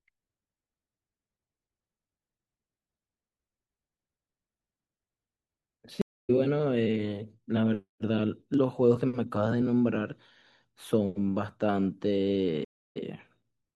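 At 6.02 s the speech drops out for 273 ms, a stream reconnect: the connection broke, the player went quiet, then reopened the stream with a fresh decoder. Playback resumes at about 6.31 s, roughly 150 ms further into the speech, so a short piece is skipped. A second stream reconnect at 12.65 s leaves 311 ms of silence, but this time resumes 43 ms earlier than where it stopped, briefly repeating a fragment.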